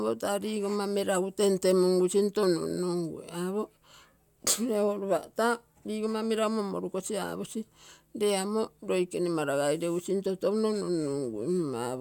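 No technical fault can be heard anywhere in the speech recording.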